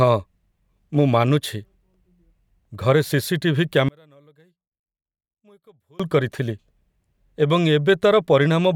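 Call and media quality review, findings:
Speech drops almost to nothing, 3.89 to 6.00 s, down about 35 dB, just a faint residue left. Likely one channel inverted: flipped polarity on one side, so the centred voice cancels itself when the pair gets folded to mono.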